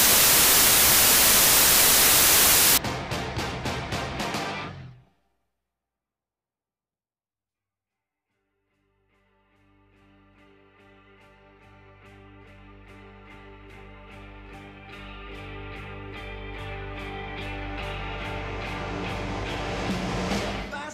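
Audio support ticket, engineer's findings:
Loud broadband noise from 0.00 to 2.78 s, with the original sound buried beneath it, slowed to 0.75x speed and lowered in pitch. Wrong sample width: 32-bit data apparently read as packed 24-bit, so bytes misalign across samples and only some values keep the true top bits. Suspect decoder or format-negotiation stage.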